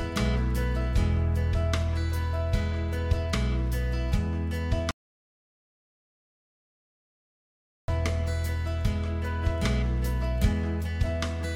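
The audio has one audio dropout to silence, from 4.91 s to 7.88 s. The sound cuts off abruptly and returns mid-flow about 2.97 s later. The gap is digital silence, with no room tone. The input was likely lost while recording continued, so that stretch is gone.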